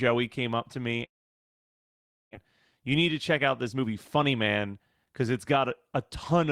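From 1.05 to 2.37 s, a long network dropout likely occurred. A brief fading buzz gives way to near-silence, a flat waveform gap, and about a second of speech never returns.

From 3.18 to 5.57 s, a jitter buffer speed-up drains excess delay by cutting pitch-period slices. Speech runs about 10% fast at unchanged pitch, with roughly 0.3 s removed and visibly compressed syllables.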